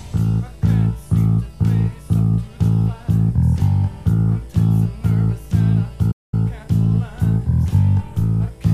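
The audio has a single playback stall at 6.11 s. The sound cuts out mid-flow and the output stays silent until 6.34 s, a gap of about 210 ms. That is long enough to register as a clear hole rather than a click. Playback then picks up again. The likely cause is the player running short of buffered data, or its playback thread being held up, so nothing reached the output until it recovered.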